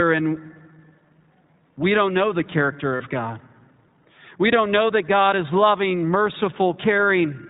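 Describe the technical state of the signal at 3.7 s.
At 3.7 s the speech is still passing through the iLBC codec that shapes the whole clip. Each 20 ms frame's excitation is coded independently, which fits the 15.2 kbps mode. Nothing above 4 kHz survives, leaving the speech dull, rough and plainly synthetic.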